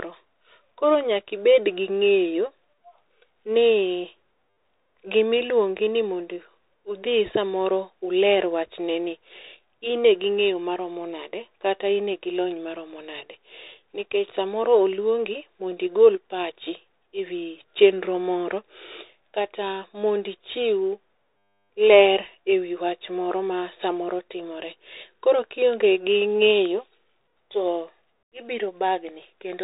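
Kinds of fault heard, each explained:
Bluetooth CVSD headset codec: The speech has gone through the narrowband Bluetooth headset path. Each sample carries only an up-or-down step whose size adapts, which points to a 64 kbps CVSD link. Nothing above 3.8 kHz survives, s sounds turn scratchy, and a granular hiss sits under the speech throughout. A plain telephone-band filter would dull the sound just as much but leave it clean, without the grit or the overloaded slopes.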